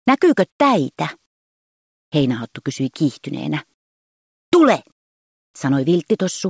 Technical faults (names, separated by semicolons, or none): comfort noise in place of the background